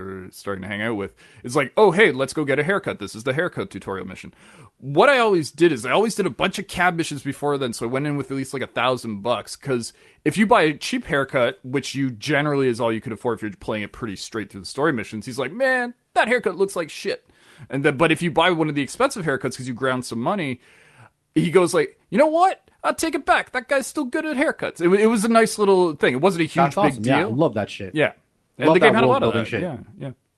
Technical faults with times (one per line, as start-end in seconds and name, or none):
none